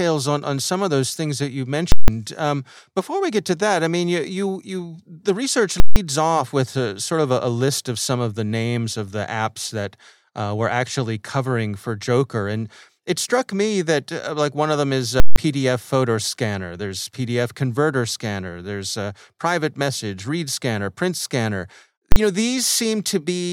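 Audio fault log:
1.92–2.08 s, 5.80–5.96 s, 15.20–15.36 s, invalid numbers at full scale: a calculation broke down and each 160 ms block was pinned at one extreme value. Each is heard as a loud pop, silence, then another pop. The first comes after "those things that you", and the third falls between "of them is a" and "photo scanner".
22.12–22.16 s, invalid numbers at full scale: a 40 ms block after "read scanner print scanner" was stuck at one extreme value, too short to separate, so it is heard as a single bang.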